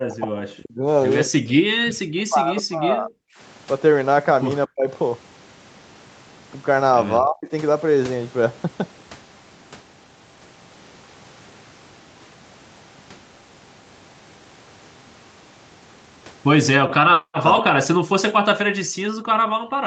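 From 0 to 0.86 s, 1.64 to 3.28 s, 4.67 to 4.89 s, 7.19 to 7.52 s and 17.07 s to the end, the speech sinks or drops out by up to about 40 dB, and about 30 dB at 7.19 s. This is likely speech suppressed in double talk, with the echo canceller turning the talker down along with the echo.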